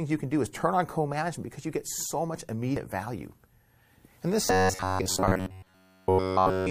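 At 2.77 s, just after "you get so much", the audio jumps forward by about a tenth of a second: compressed frames skipped. One frame of roughly 92.9 ms is lost, either missing from the stream or rejected by the decoder as damaged. On a spectrogram the formant tracks break and resume slightly displaced.

From 4.45 s to 6.70 s the sound becomes a rigid metallic buzz at 93.8 Hz that only loosely follows the speech. This is robotic sound from repeated short buffers, likely caused by new audio arriving too rarely, so the same fragment of about 10.7 ms is replayed over essentially the whole stretch while the real audio is skipped. A waveform shows an identical shape repeating every 10.7 ms, and a spectrogram shows evenly spaced horizontal harmonic lines at multiples of 93.8 Hz.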